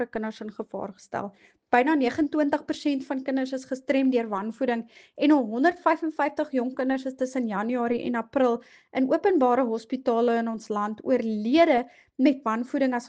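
Nothing goes wrong anywhere in this audio; there's no dropout, glitch or other technical fault to point to at any moment.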